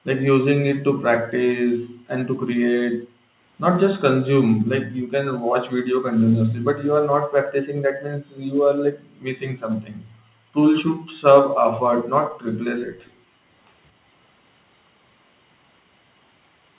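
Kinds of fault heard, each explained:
Background gated by the echo canceller: At 0.0, 1.82, 2.94, 4.56, 6.15, 7.03 and 11.92 s, the room sound dips by about 40 dB while the far end's loudspeaker plays. The canceller clamps the microphone, then lets go. The longest gap runs from 7.03 to 10.55 s.
Echo leak: From 13.05 to 13.11 s, a faint delayed copy of the speech, roughly 35 dB below it and 224 ms late, slips through. It is likely loudspeaker pickup that the echo canceller failed to fully remove before sending it back.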